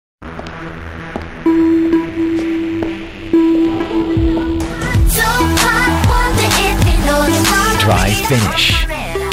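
A gritty, inharmonic fizz runs through the whole recording, tracking its louder and brighter passages. That is crude rate conversion: samples were simply repeated without filtering, which fits a 44.1 kHz to 48 kHz change. The error sits roughly 25 dB below the signal. On a spectrogram it shows as faint stray lines unrelated to the real partials, and the waveform shows small stair-steps.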